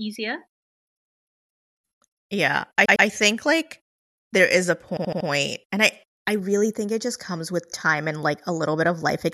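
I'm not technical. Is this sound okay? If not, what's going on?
No, there are two stutters from repeated frames: a tenth-of-a-second chunk replays twice at 2.85 s, and a shorter chunk replays four times at 4.97 s.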